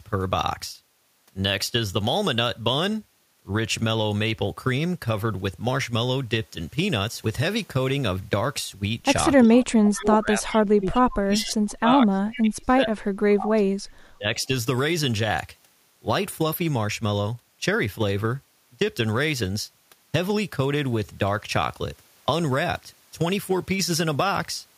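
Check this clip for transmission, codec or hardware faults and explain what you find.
Two faults show up in the speech, both between about 9.5 and 14.5 s.

Speech suppressed in double talk occurs at 9.46–9.52 s, 9.86–13.73 s and 14.12–14.49 s. The voice dips. The first dip is brief and shallow, about 15 dB. The later two go down by roughly 35 dB, and the long one takes about three seconds of speech away. The likely cause is an echo canceller that heard both sides at once. It could not tell the talker from the echo, so it turned everything down.

Echo leak appears at 9.56–9.65, 10.50–10.62, 11.38–11.54 and 12.32–12.41 s. Each time a faint, delayed copy of the voice comes back. It arrives about 367 ms late and sits about 20 dB below the speech. The copies are short scraps. The likely cause is a loudspeaker on one end of the call. Its echo canceller left part of the pickup in place and sent it back down the line.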